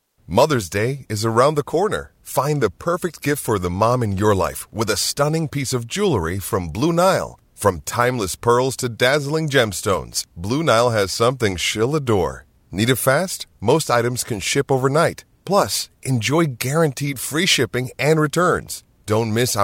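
No technical faults are audible.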